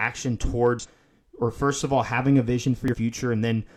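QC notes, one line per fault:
0.79–0.86 s and 2.88–2.95 s: damaged data in a compressed stream. Corrupted bytes throw the decoder out of sync. It misreads frames, producing brief glitches.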